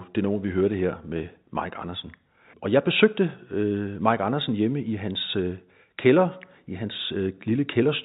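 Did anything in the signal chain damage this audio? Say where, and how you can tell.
No, nothing in the signal chain damaged this speech. It has passed through G.711 telephone coding: nothing above 4 kHz is present, and any quantisation noise tracking the level of the speech is faint at most, as expected of a 64 kbps mu-law telephone path.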